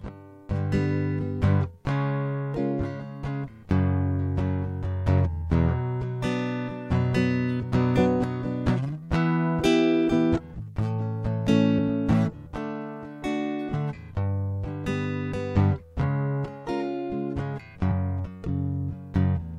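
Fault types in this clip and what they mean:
Compressed frames skipped: at 7.62, 9.59, 13.73 and 17.9 s the music jumps ahead by roughly 100, 150, 200 and 50 ms. Whole frames, consistent with frames of about 23 ms, were never decoded.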